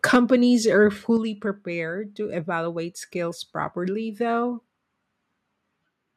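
From 0.04 to 0.35 s the speech shows microphone overload, driven about 5 dB past the converter's limit, likely from the input volume being set too high. The loudest syllables crackle harshly, the waveform peaks are sliced flat, and the spectrogram shows bright broadband smears above the harmonics.

Partway through that stretch, at 0.16 s, the microphone volume is stepped down by about 3 dB, and again at 1.17 s by about 6 dB. This is likely the call software cutting input gain after detecting clipping. Voice and background drop together at once, so the waveform envelope shrinks in a sharp step and the whole spectrogram darkens at those instants.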